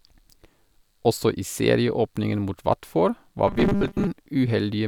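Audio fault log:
3.48 to 4.08 s, robotic sound from repeated short buffers. The speech turns into a stiff, metallic buzz locked at 200 Hz, which still loosely tracks the words. A fixed pitch like this comes from one short chunk of audio looping back to back, and 200 Hz fits a 5 ms chunk. The likely cause is audio arriving too slowly, so the player repeats its last buffer to fill the gap. Most of the real audio in this stretch is skipped.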